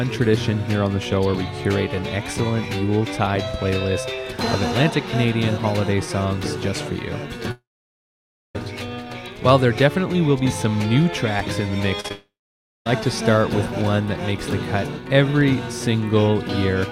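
From 7.51 to 8.57 s the sound briefly carries on as a fading buzz, then falls to near silence for about 0.93 s before resuming with a jump. About 1.04 s of audio is simply gone. This is a long network dropout, likely caused by a stretch where nothing reached the receiver. The receiver extended the last sound for a moment and then gave up, and playback picked up later without the missing part.

At 12.01–12.06 s and again at 12.08–12.12 s there are two quick smeared wobbles. These are short concealed packet losses of about 40 ms and 20 ms. Those slices arrived too late or not at all, and the decoder patched each gap by prolonging the preceding sound before blending back. They merge straight into a second long network dropout from 12.12 to 13.01 s, again likely caused by audio failing to arrive. There, about 0.74 s is lost and roughly 0.55 s of it is heard as silence after a brief fading tail.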